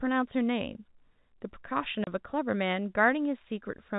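A speech clip carried over G.711 telephone coding, with the band closing off around 4 kHz, has one case of packet loss filled with silence from 2.04 to 2.07 s. A 30 ms hole drops to dead silence with hard edges, which points to a single lost packet. A concealment scheme would smear or repeat the neighbouring sound across the gap, and a noise gate would fade it. Here there is an abrupt silence.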